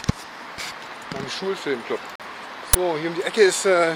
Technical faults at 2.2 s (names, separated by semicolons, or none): digital broadcast dropout